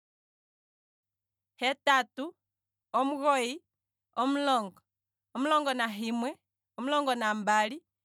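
The speech signal has no technical faults, and the only level change is a smooth editorial fade-in, beginning at about 1 s and reaching full level by 1.04 s, with no click or hard edge.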